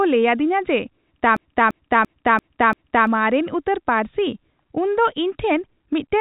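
At 1.37 s the speech locks into a system hang loop until 3.07 s. The same 341 ms chunk repeats five times at about 2.9 Hz, a stuttering stall consistent with a 16384-sample buffer. Roughly a second and a half of audio is lost, all through the telephone-band sound topping out at 3.8 kHz.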